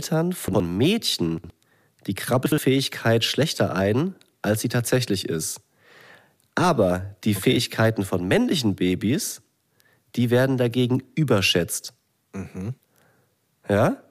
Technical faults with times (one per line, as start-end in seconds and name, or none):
0.48-0.60 chunks out of order
1.38-1.50 chunks out of order
2.46-2.58 chunks out of order